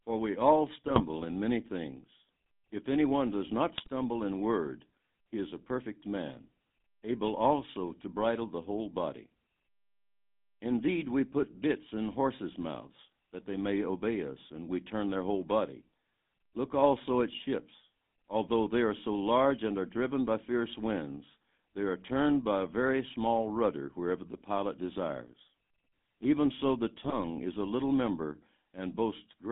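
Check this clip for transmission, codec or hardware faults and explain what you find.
Two faults are present. The speech has passed through a GSM full-rate codec, and three short bursts of GSM bit errors break it up.

The GSM full-rate codec colours the whole clip. The codec models the vocal tract and drives it with a sparse train of regular pulses. Much of the fine excitation detail is lost. The damage is plainly audible as a buzzy, gravelly roughness. The band runs from about 200 Hz to 3.7 kHz, so the top end is gone. That sound fits a 13 kbps full-rate stream.

GSM bit errors strike at 0.87 to 1.02 s, after "we all" and before "in many things". They return at 3.78 to 3.88 s, between "anyone does not" and "in word he is". The last burst is at 26.97 to 27.15 s, after "so the" and before "is a little member". Flipped bits corrupt the decoder's filter, pitch and gain values. Each burst sounds like squawks, pops and gargling. 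The longest burst is the last one. The damage suggests an error rate near 2 percent.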